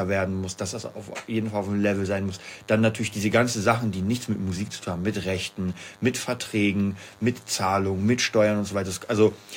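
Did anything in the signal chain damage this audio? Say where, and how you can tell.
Yes: DECT cordless phone buzz throughout. Radio bursts every 10 ms are rectified in the analogue wiring, giving a thin, harmonic-rich 100 Hz buzz unlike smoother mains hum.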